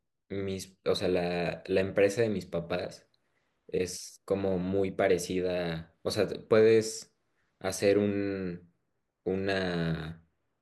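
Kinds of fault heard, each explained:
No faults can be heard anywhere in this recording.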